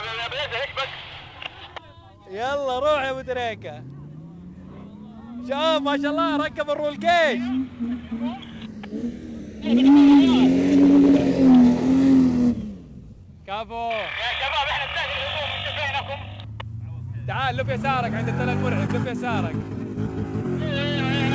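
Running through the whole clip there's clock drift between sender and receiver: the sending side's clock runs fast, by something around 4 percent. Audio keeps arriving a bit quicker than it's played out, so the jitter buffer steadily fills and has to be trimmed back.

You hear that trimming as repeated timing corrections from 0.56 to 13.91 s, and again from 16.10 to 19.27 s. The receiver keeps snipping out short pieces, unevenly spaced, so the sound comes across about 104 percent fast, with small hiccups and a slightly unsteady, hurried tempo. The band stops at 8 kHz, which fits G.722 at 64 kbps.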